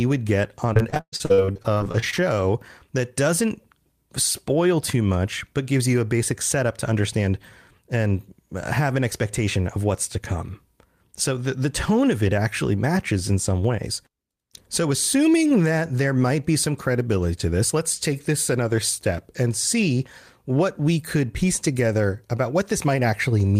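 Right after "would get on", from 0.73 to 2.19 s, the speech breaks up with repeated packet loss, giving a robotic sound. Around twenty short holes follow one another, the longest about 114 ms. Each is patched by stretching the previous fragment, so about 37% of the stretch is filler, heard as choppy, robotic sound with pieces missing. On a spectrogram the harmonics freeze into flat, repeated bands broken by vertical seams. The waveform shows copied cycles and abrupt joins.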